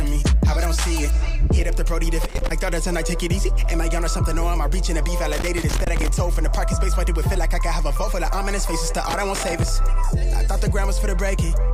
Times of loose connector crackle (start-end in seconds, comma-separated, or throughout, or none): 2.23-2.51, 5.32-6.08, 9.09-9.68